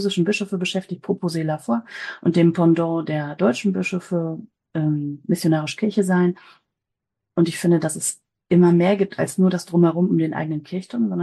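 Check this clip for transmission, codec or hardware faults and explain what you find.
Nothing here sounds wrong to me, so there's no fault to point to in this one.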